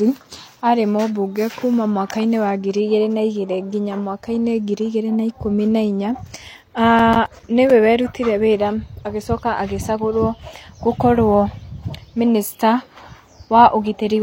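From 6.99 to 7.70 s the speech breaks into a burst of processor overload crackle. The system could not finish its small audio buffers on time, roughly 5 ms each. About ten deadlines were missed across this stretch. Each miss dropped a short patch of silence with hard edges into the sound. Together these gaps give a gritty, tearing crackle. It stops just before "werutire wĩra agĩcoka agĩcagũrwo".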